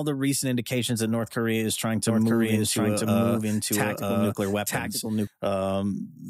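A second capture path or an out-of-step edit likely mixed the speech in twice, producing a doubled audio track from 2.07 to 5.27 s, just after "is trying". A full-band copy at about equal level trails roughly a second behind, starting and stopping abruptly.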